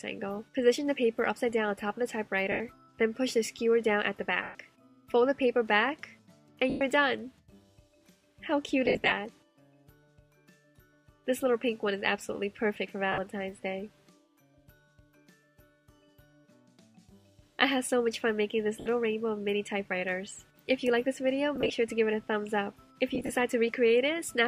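Lost LE Audio frames break up the audio at 2.52 s (80 ms), 4.43 s (120 ms), 6.70 s (110 ms), 8.86 to 9.12 s (scattered, longest run about 70 ms), 13.12 s (60 ms), 18.80 s (60 ms), 21.56 to 21.70 s and 23.15 to 23.29 s. In each gap, the LC3 decoder conceals the missing frames by repeating the last spectrum with randomised phase, so any tonal content turns into a brief noisy smear that fades toward silence in the longer gaps. The gap lengths fit 10 ms frames.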